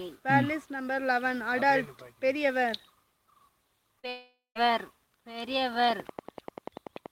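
At 3.99 to 4.05 s there is a short concealed packet loss. About 40 ms of audio never reached the decoder in time, so the receiver extended the preceding sound and blended back, leaving a brief smear across the gap.

A long network dropout follows from 4.09 to 4.57 s, likely from audio failing to arrive for nearly half a second. The receiver first continues the last sound as a fading buzz or hiss, then about 170 ms of silence remains before the audio resumes, with that portion missing.

From 5.90 s to the end at 7.11 s, a train of clicks ticks at a regular 10.4 per second, likely from interference or a faulty connection. The clicks share one shape, stand roughly 10 dB above the signal, and sit audibly over the sound throughout.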